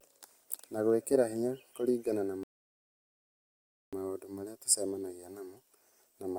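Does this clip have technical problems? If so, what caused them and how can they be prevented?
Yes. The speech stops dead at 2.43 s and the audio goes silent until 3.93 s, then picks up exactly where it left off. This is a rebuffering stall: playback consumed everything that had been downloaded, so the player halted and waited for more data before continuing. No material is skipped or repeated. The gap simply inserts about 1.5 s of dead air into the timeline. Preventing it means keeping a larger playback buffer and adapting to a lower bitrate when throughput drops.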